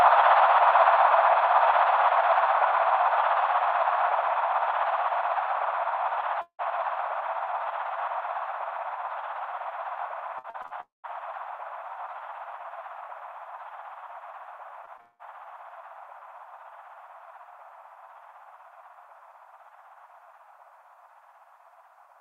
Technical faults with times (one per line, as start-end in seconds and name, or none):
6.41-6.60 long network dropout
10.38-10.72 repeated packet loss (robotic sound)
10.80-11.05 long network dropout
14.85-15.01 short concealed packet loss
15.01-15.21 long network dropout